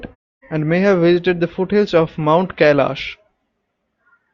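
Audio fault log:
No faults are heard in this speech clip. In the pauses the background fades to silence and returns in time for the next sound, as muted pauses should, with no speech lost.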